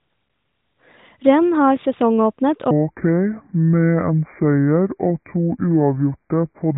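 From 2.71 s to the end, a section at the wrong speed: the playback clock for this stretch likely ran slow, so the audio comes out at about 0.64 of its recorded speed. Pitch and tempo drop together right after "har sesongåpnet", lowering the speech by roughly seven semitones and drawing it out into a deep, dragging sound up to "de tre". The narrow mobile-phone bandwidth, with nothing above 4 kHz, carries through the slowed part.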